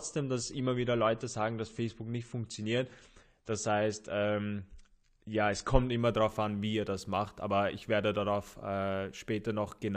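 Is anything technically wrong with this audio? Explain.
Yes, one thing. From 0.0 to 6.0 s, it's an adaptive stream starting at a low bitrate. The speech has nothing above 9 kHz and heavier codec smear, which fits a 32 kbit/s start. Then it jumps cleanly, with no gap, to fuller, brighter speech, consistent with a step up to about 96 kbit/s.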